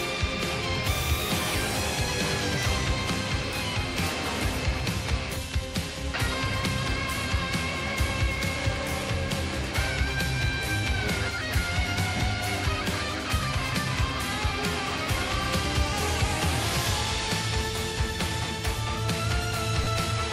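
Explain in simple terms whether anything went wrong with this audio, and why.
Brief noisy smears replace the sound at 12.17–12.20 s, 17.98 s and 19.84–19.87 s. These are lost LE Audio frames: Bluetooth dropped 10–30 ms chunks, and the receiver patched them with scrambled copies of the preceding sound.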